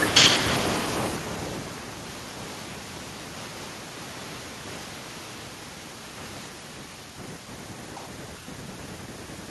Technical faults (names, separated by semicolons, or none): feedback echo between two devices